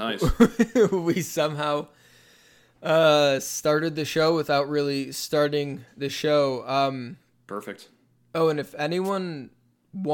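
At 9.04 to 9.10 s, just after "and if", a wireless microphone noise hit interrupts the speech. The FM radio link fades momentarily as reflected signals cancel, the receiver's noise rises, and a 56 ms swish of static sits over the speech.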